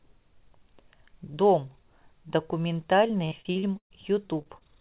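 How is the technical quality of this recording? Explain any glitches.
The main problem sits near the end: from about 3.08 to 4.63 s there's a burst of repeated packet loss that gives the speech a choppy, robotic edge. The whole clip is band-limited, with nothing above 4 kHz, which fits a G.711 telephone-style call path.

In that last stretch, nine holes open up in quick succession, the longest about 118 ms. Each one gets papered over by stretching the previous sound, and about a fifth of the span ends up concealed, so you hear a stuttering texture with bits clipped out.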